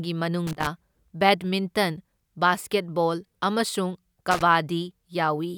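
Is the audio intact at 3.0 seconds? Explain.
Yes, the speech at 3.0 seconds plays through intact, with no fault at that moment.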